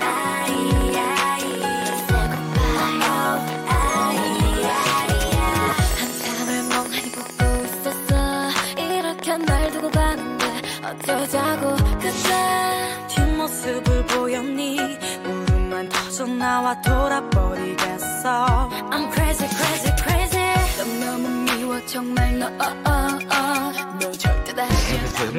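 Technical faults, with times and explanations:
0.01–11.94 s: train of clicks. Roughly 150 similar pulses arrive at about 10.8 per second with irregular spacing, peaking about 5 dB above the programme and ticking through pauses too. Likely cause is interference from nearby equipment or a faulty connection or power supply.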